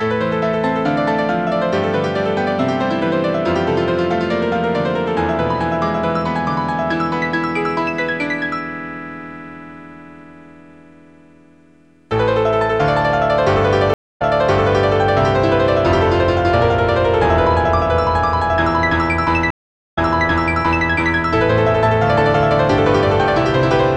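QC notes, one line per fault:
13.94–14.96 s and 19.50–20.88 s, stream reconnect: the connection dropped twice, and each time the player reconnected and started a new decoder mid-stream. The sound goes silent for 262 ms, then 464 ms. Because the server resends a burst, it resumes about 0.76 s and then about 0.91 s earlier, so material just heard repeats. Each restart enters muted or faded as the fresh decoder begins.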